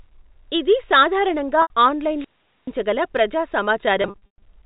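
Right after "ఇది సాధారణంగా", at 1.62 s, there's an 80 ms packet loss with pitch repetition. The receiver just loops the last pitch period across the gap, so you get a short held, buzzy note, which fits a few 20 ms packets going missing. At 2.15 s comes a wireless microphone squelch dropout. The FM link fades, hiss rises briefly, then the receiver's squelch mutes everything for about 430 ms before the sound comes back around 2.73 s. The same packet loss with pitch repetition returns at 4.02 to 4.42 s, this time scattered, with 260 ms lost across 400 ms and the longest run 120 ms. That longer run fades toward silence before cross-fading back, and the shorter ones buzz like the first.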